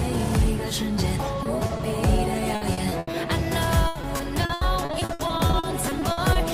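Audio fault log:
1.43 s, 1.67 s and 1.77 s: short concealed packet loss. Each time about 20 ms of audio never arrived, which fits one lost 20 ms packet. The decoder carried the previous sound across the hole and blended back, so you get a quick smear or wobble.
2.55–3.15 s and 3.87–6.37 s: repeated packet loss (robotic sound). Holes keep arriving, five in the first stretch and nineteen in the second, each up to 80 ms, with about 37% and 26% of those spans patched. The constant patching gives that choppy, robotic texture with pieces missing.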